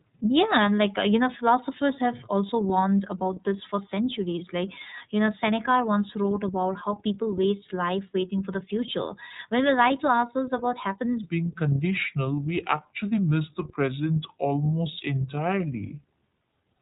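iLBC codec damage runs through the whole clip. The speech is band-limited to below 4 kHz, so sibilants and breath lose their top end. Each short block of the signal is coded on its own, without drawing on the one before, and the result has a plainly audible rough, slightly synthetic grain. The character fits iLBC in its 30 ms frame mode at around 13.33 kbps, a narrowband VoIP setting.

A section at the wrong speed starts at 11.23 s and lasts to the end of the clip at 16.81 s. From that point the audio plays at 0.734 times its proper rate, so speed and pitch drop together. The speech turns slow and dragging and sits roughly five semitones lower, deeper and heavier than before the change. The sudden shift is likely due to this stretch being played against the wrong clock.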